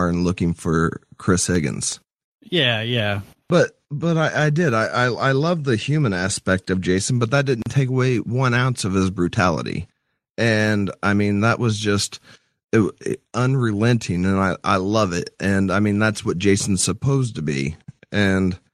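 From 1.37 to 2.11 s, five CD scratch ticks sound at a steady rhythm, each under a millisecond. A surface blemish is defeating error correction once per disc revolution, so the player patches samples. That regular spacing distinguishes them from random vinyl crackle.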